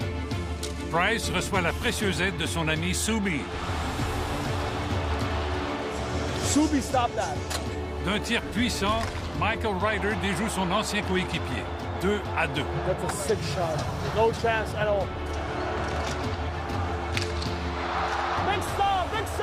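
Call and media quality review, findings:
Nothing to flag here: a full listen turned up no audible faults on this path, so no action is needed.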